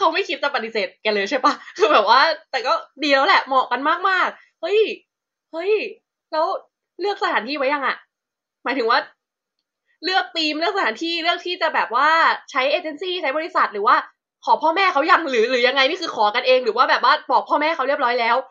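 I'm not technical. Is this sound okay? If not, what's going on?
Yes, no faults heard.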